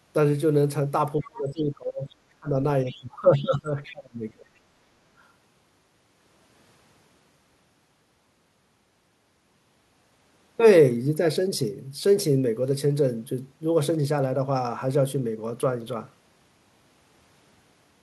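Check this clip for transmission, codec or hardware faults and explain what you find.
Four kinds of fault are audible, clustered early in the speech, plus a regular chunking defect.

Other side's voice leaking through: residual echo was likely left uncancelled from the loudspeaker, so faint scraps of a second voice surface at 1.21–1.3 s, 2.09–2.15 s and 2.87–2.92 s, about 25–35 dB below the talker.

Speech suppressed in double talk: the echo canceller likely mistook overlapping talk for echo and attenuated everything, so the voice sinks by up to about 25 dB at 1.21–2.11 s, 2.3–2.56 s and 2.84–4.54 s.

Overlapping chunks: processing blocks of 6 s each began 6.5 ms before the previous one ended, repeating that sliver and producing a small click at 3.87, 9.87 and 15.88 s.

Background gated by the echo canceller: the canceller clamped the microphone hard while the loudspeaker was active, so room sound briefly drops about 10 dB at 4.89–5.05 s before recovering.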